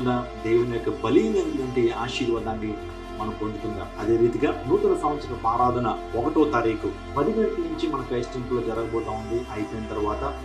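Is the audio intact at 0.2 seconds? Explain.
No. At 0.2 seconds, and right through the clip, there's channel delay causing comb filtering. One channel lands roughly 3 ms behind the other, and when the two get folded to mono, anything they share cancels at evenly spaced frequencies, with the first notch somewhere around 150 Hz and more stacking up above it. That's why the sound comes across hollow and a bit phasey, with a scooped character that never shifts.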